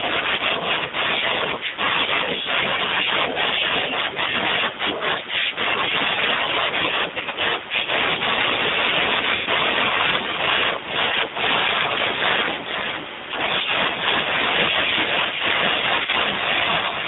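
G.729 codec, throughout the speech: the whole clip passes through an 8 kbit/s G.729A-style coder, confined to a line band of roughly 150 Hz to 3.7 kHz. The coder rebuilds the speech from a vocal tract filter and a pitch predictor, exciting them with a few sparse pulses per 10 ms frame. The damage is plainly audible as dull, boxy speech with a rough, slightly synthetic grain.

VoIP packet loss concealed by the speech codec, at 7.19 to 7.36 s, 9.35 to 9.49 s, 11.08 to 11.15 s and 16.03 to 16.16 s. In each gap the decoder extends its last pitch and filter state and lowers the gain as it goes. At 7.19 s, about 80 ms of brief dropouts, none longer than 20 ms, are scattered across 140 ms. These are heard as stretched, fading patches. The 110 ms gap at 9.35 s stretches into a fading sound. At 11.08 s the 40 ms gap is a short smear. At 16.03 s, 60 ms of dropouts, none longer than 20 ms, are spread over 100 ms, each stretched and fading. 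The speech stays weak or distorted for a while after each gap.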